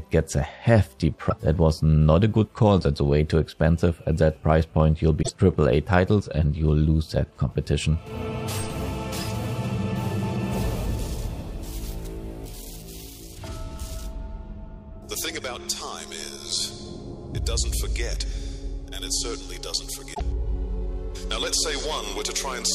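Damaged data in a compressed stream breaks the audio at 1.27–1.33 s, 5.19–5.30 s and 20.10–20.21 s. The decoder misreads corrupted frames and loses sync, so each spot gives a brief chirp, squawk, click or short hole, appearing on a spectrogram as a short broadband smear or gap and in the waveform as an abrupt discontinuity.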